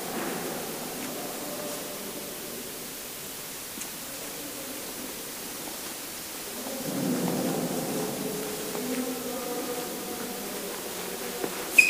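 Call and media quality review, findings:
Constant, even hiss across the whole clip, with no distortion on top. Low bit depth with dither in the conversion or export stage. Only about 6 bits in use. Dither turns rounding error into steady white noise, nearly as loud as the sound itself.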